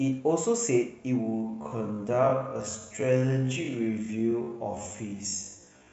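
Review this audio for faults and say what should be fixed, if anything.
Time-stretched section from 1.19 s to the end: the speech abruptly drops to about half speed (0.51x) at unchanged pitch, so it drags. Likely cause: software lengthened this part to fit a duration by repeating short slices. To prevent it, re-edit or re-record rather than stretching to fit.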